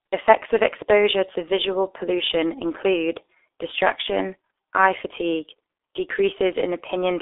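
Speech, carried throughout the 7 s clip by a G.723.1 codec. Energy stops near 3.8 kHz and the usable band sits roughly between 300 Hz and 3.6 kHz, so the voice sounds muffled and thin at both ends. Coding damage is heavy. The slowly updated vocal model across long frames leaves a hoarse texture and smears consonant onsets together, which points to a rate around 6.3 kbit/s.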